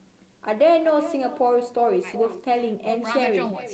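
Speech with echo and no canceller throughout: a thin copy about 12 dB quieter repeats each phrase roughly 0.4 s later, a distinct delayed repeat rather than room reverb's smooth decay.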